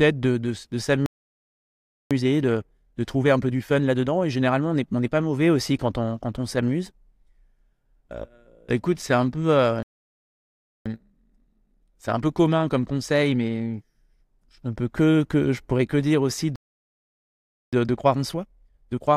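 Speech stops dead at 1.06 s and stays silent until 2.11 s. This is a playback stall of about one second. The player likely ran out of data or was blocked. Time-compressed catch-up follows at 2.11 s. Small pieces are cut out and cross-faded, so the speech runs 1.25 times fast at normal pitch. It settles at 5.11 s, just before "mauvais aussi quand on". After "écoute c'est un peu", a second stall silences 9.83 to 10.86 s. Catch-up then runs to 13.86 s at 1.15 times speed. After "pourrais que dire aussi", a third stall lasts from 16.56 to 17.73 s. Catch-up at 1.25 times runs to the end of the clip.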